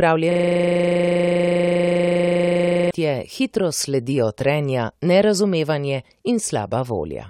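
From 0.31 to 2.91 s, a system hang loop: the computer or driver froze while the audio hardware kept replaying its ring buffer. One 40 ms slice of the speech repeats exactly, 65 times, cycling at 25 Hz as a steady buzz.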